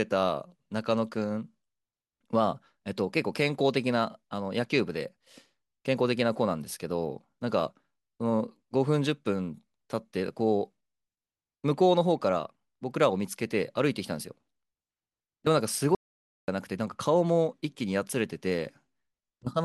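At 15.95 s the speech stops dead, and it resumes at 16.48 s. This is an audio dropout to silence lasting about 0.53 s. The gap is silent, with no room tone. The input was likely lost briefly while recording continued.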